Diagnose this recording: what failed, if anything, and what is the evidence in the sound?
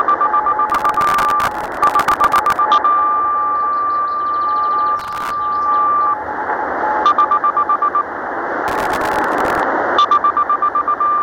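The failure is at the driver and buffer stage: processor overload crackle. Three bursts of gritty tearing ride on the sound, from 0.70 to 2.58 s, 4.99 to 5.30 s and 8.68 to 9.60 s. Each stops cleanly when the load passes. The processor kept missing its deadlines, and each miss replayed a scrap of old audio with hard edges. The grain of the crackle fits very short buffers, around 1.5 ms, failing dozens of times in a row.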